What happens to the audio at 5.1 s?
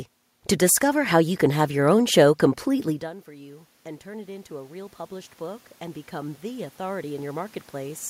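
At 5.1 s the automatic gain is still rising. The rise runs from 2.83 s to 8.05 s. Around 3 s the talker moves away, and the level at the microphone drops by about 24 dB. The gain control reads this as a weak input and slowly turns itself up, by about 13 dB in all. The voice climbs back gradually, and the room noise behind it swells by the same amount.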